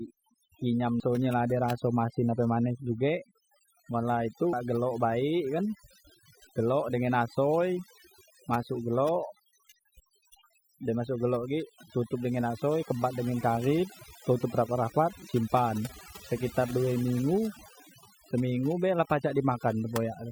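Overdone noise removal runs through the whole recording. The noise reducer was set too aggressively, pulling individual frequency bands down or out whenever they sat near its noise estimate, so the background collapses to near silence with twinkling specks and the voice loses its quieter components as they are cut away. At 1.0 s and again at 4.53 s there is damaged data in the compressed stream. Corrupted bytes in the encoded file cause the decoder to misread those frames and lose sync while it hunts for the next valid frame header, leaving a brief chirp or blip at each point.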